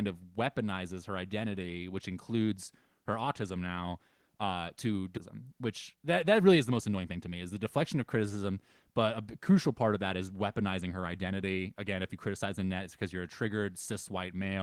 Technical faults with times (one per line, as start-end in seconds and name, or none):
5.17-5.19 skip ahead
5.41-7.42 jitter buffer speed-up